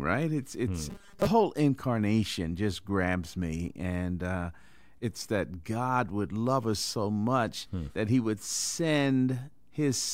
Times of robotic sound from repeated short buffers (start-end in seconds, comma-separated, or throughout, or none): 0.90-1.27